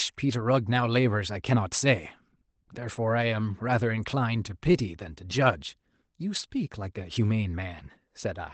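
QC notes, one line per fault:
6.35–6.45 s, lost packets rebuilt from error correction: about 60 ms of audio, consistent with three lost 20 ms packets, was replaced by the low-bitrate backup copies each following packet carried. There is no gap, but that stretch sounds rougher and noisier than the 8 kHz-bandwidth Opus around it.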